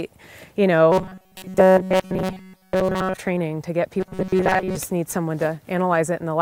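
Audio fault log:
0.92 to 3.17 s and 4.00 to 4.77 s, robotic sound from repeated short buffers: the sound turns into a rigid metallic buzz pitched at 188 Hz, loosely tracking the original but with most of the real material missing. The likely cause is audio arriving too seldom, so the same slice of about 5.3 ms is replayed in place of what was skipped. On a spectrogram, straight horizontal harmonic lines appear at multiples of 188 Hz. The waveform shows identical cycles repeating every 5.3 ms.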